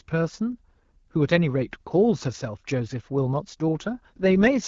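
Speech over AMR wideband (HD Voice) in which an AMR rate drop begins at 4.16 s and runs to the end at 4.67 s. The codec switches to a lower mode, which fits a step from 12.65 to 6.6 kbit/s, so the voice turns rough and raspy without any gap or narrowing of the band.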